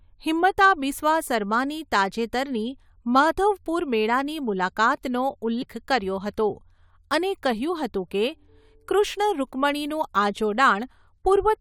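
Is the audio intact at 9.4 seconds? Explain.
No. Right around 9.4 seconds the speech is broken by a brief glitch from 9.37 to 9.39 s, lasting only about 23 ms. This is damaged data in a compressed stream: part of the encoded data at that point is corrupted, so the decoder misreads the affected frame, loses sync, and skips ahead to the next valid frame header before normal decoding continues.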